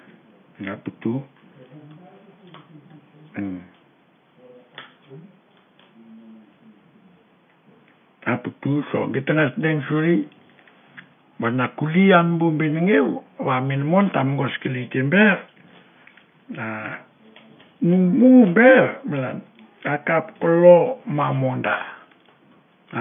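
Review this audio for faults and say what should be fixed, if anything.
Nothing stood out on listening, so there is nothing here that needs fixing.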